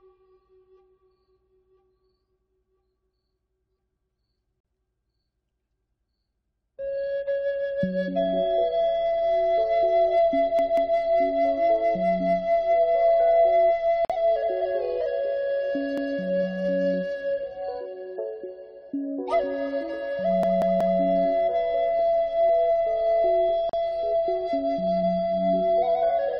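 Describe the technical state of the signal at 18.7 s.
At 18.7 s the signal is intact, with no dropout, distortion, glitch or other audible fault at that moment.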